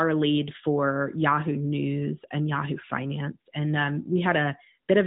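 No technical faults can be heard in this speech.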